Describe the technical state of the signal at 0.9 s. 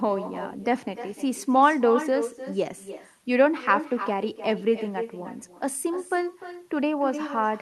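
At 0.9 s the speech carries an echo with no canceller, present across the whole clip rather than at that moment alone. The far end replays the audio through a loudspeaker, its microphone picks it up, and nothing subtracts it, so each phrase returns roughly a third of a second later, about 10 dB down and thinner. Room reverberation smears continuously into the tail, but this is a distinct, delayed repeat separated from the original.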